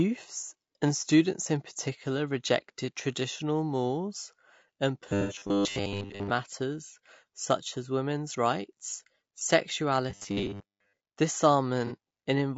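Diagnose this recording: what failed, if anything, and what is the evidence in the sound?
The codec stage shows damage through the whole speech clip: voices sound rough and grainy, with noise filling the gaps between harmonics and a thin, synthetic top band. This is likely low-delay AAC compression (AAC-ELD), whose short frames resolve pitch poorly, and the damage fits a bitrate around 32 kbps.

A driver or buffer fault appears from 5.09 to 6.3 s, just after "rejected traditional mores and", and again from 10.10 to 10.95 s. The speech turns into a rigid metallic buzz at 100 Hz. This is likely robotic sound from repeated short buffers: 10 ms of audio is replayed while fresh audio is skipped, with roughly two-thirds or more of the material repeated.

AAC frame loss with concealment, at the network or decoder stage, produces a smeared, noisy patch from 5.21 to 5.36 s, inside the first buzzing section after "rejected traditional mores and", and a shorter one from 11.87 to 11.92 s. 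The decoder covered about 90 ms and 30 ms of missing audio by extrapolating from the last good spectrum.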